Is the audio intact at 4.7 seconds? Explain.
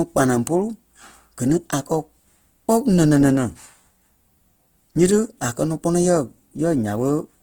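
No. At 4.7 seconds, as across the whole clip, the speech carries plainly audible Opus compression damage. It sounds rough, grainy and noisy rather than swirling or watery, which sets it apart from MP3-style artefacts. The likely cause is Opus running in its music (CELT) mode at a bit budget that fits roughly 16 kbps. Each band keeps its energy, but missing detail is patched with folded or noise-like content. Bandwidth is not narrowed, with content reaching about 20.1 kHz, so the sound is grainy rather than muffled.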